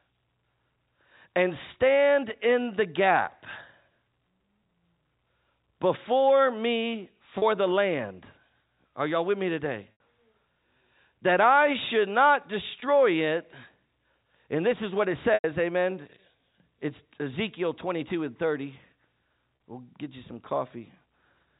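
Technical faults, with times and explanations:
7.38–7.42 s, 9.92–10.00 s, 12.80 s, 15.34–15.44 s and 19.56–19.60 s: packet loss with pitch repetition. Chunks of audio drop out, and the receiver fills each gap by looping the last pitch period. The 20 and 40 ms gaps come across as a brief held, buzzy tone. At 9.92 s (80 ms) and 15.34 s (100 ms), the repeat fades toward silence before the sound cross-fades back. Those lengths suggest lost 20 ms packets, and all of it rides on ordinary G.711 telephone-band audio.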